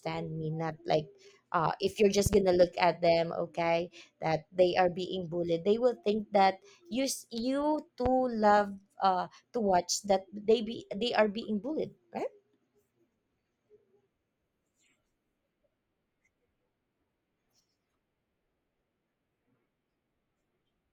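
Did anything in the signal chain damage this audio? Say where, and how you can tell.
Yes: loud pops, likely analogue-wiring voltage spikes, two at 2.26–2.36 s after "if you're" and one at 8.06–8.09 s before "love uh to watch", showing as tall waveform spikes and full-height spectrogram stripes.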